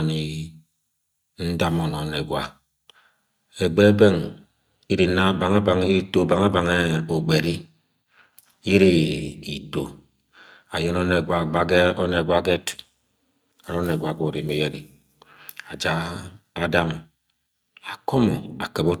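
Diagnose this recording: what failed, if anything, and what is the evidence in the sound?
From 4.24 s to the end the speech takes on a metallic buzz with extra tones around it, an overlap-add ripple. Frame-based call processing is resynthesising with windows that don't sum flat, so the level swells and dips by about 6 dB once per frame, roughly 200 times a second.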